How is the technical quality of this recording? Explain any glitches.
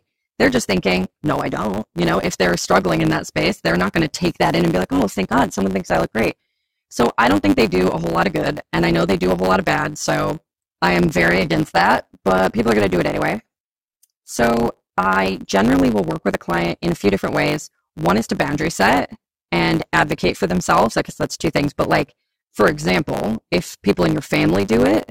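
The speech is impaired by one continuous fault. A block size mismatch (truncated) runs throughout: each oversized block loses its tail, producing a 100 Hz buzz and speech running 1.09 times fast with its timbre kept.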